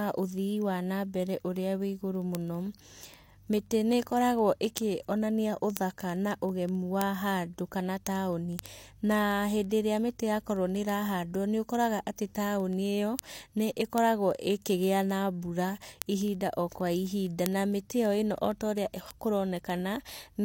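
Speech, with word clock ticks running from 0.12 s to 20.42 s. Sharp ticks of uneven strength repeat steadily, roughly every 70 ms. The receiving device is on its own clock, about 300 ppm off the sender's. Each slip drops or repeats one sample.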